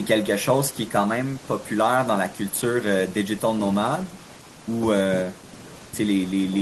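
Listening through the recorded speech, nothing stood out as a technical problem.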